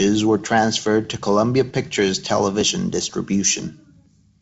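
No technical faults can be heard anywhere in the recording. The speech has passed through G.722 wideband telephone coding at 56 kbit/s, so nothing sounds above about 7.7 kHz, and the codec leaves only a light trace: a faint hiss in the upper band and slightly noisier low frequencies.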